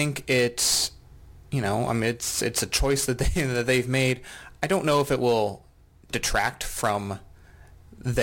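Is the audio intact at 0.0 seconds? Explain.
Yes, the speech is intact at 0.0 seconds, with no audible fault at that moment.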